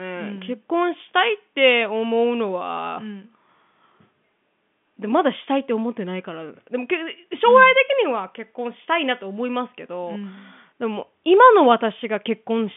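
No technical faults occur at any point in this speech.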